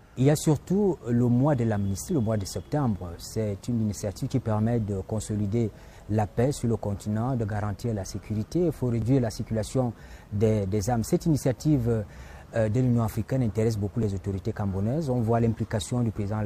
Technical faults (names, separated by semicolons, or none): overlapping chunks